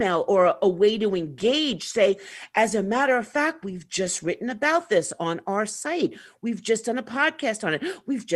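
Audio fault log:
No fault is heard anywhere in the speech recording. Nothing in it calls for an entry in the log.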